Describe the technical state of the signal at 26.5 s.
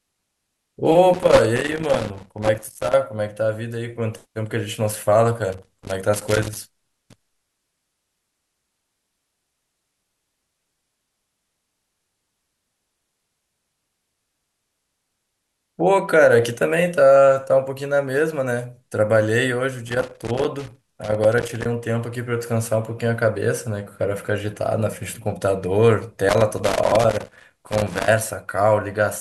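At 26.5 s the signal is inside a burst of loose connector crackle running from 26.29 to 28.08 s. A worn contact is making and breaking, chopping the speech. It is irregular, bunched scratching rather than the even, continuous ticking of surface crackle.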